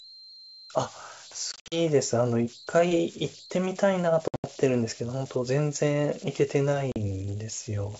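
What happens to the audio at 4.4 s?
Packet loss on an ADPCM call runs from 4.28 to 4.44 s: about 140 ms of audio drops to hard-edged silence scattered over about 160 ms, the longest gap about 80 ms. The decoder's predictor and step size lose sync, so sound resumes slightly distorted before settling. Underneath, converter idle tones persist: undithered delta-sigma patterns produce tones near 4 kHz, heard as grainy noise under the speech, about 20 dB below the signal.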